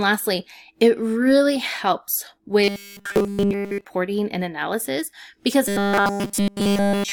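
Speech, with robotic sound from repeated short buffers from 2.64 to 3.85 s, after "it really helps" and before "and analysis because", and again from 5.68 s to the end. In both stretches the voice becomes a rigid metallic buzz at 200 Hz. The likely cause is a 5 ms block being looped entirely while fresh audio is skipped. A waveform shows one identical short cycle tiling across each span, and a spectrogram shows flat harmonics at multiples of 200 Hz.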